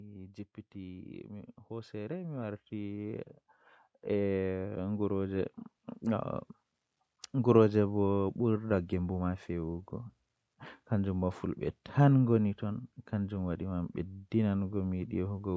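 From 0.73 to 7.63 s, automatic gain rising: the gain control judged the input too quiet and lifted it by about 11 dB, so speech and background swell together.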